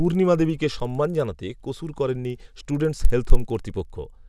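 Resampler restarted on every block, throughout the speech: each 50 ms block was converted on its own, apparently a halving such as 48 kHz to 24 kHz, so every block edge lacks its true neighbours. The resulting edge errors form a 20 Hz ticking buzz heard only under speech.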